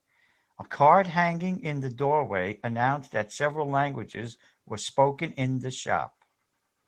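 The clip is speech, and Opus voice compression damages it plainly from start to finish. The sound fits a hybrid setup. A linear-prediction coder handles the band below 8 kHz, and a transform layer covers the top of a fullband signal. The rate sounds like about 16 kbps, in 20 ms frames. At that rate the excitation is coded coarsely. So the speech takes on a hoarse, slightly robotic edge.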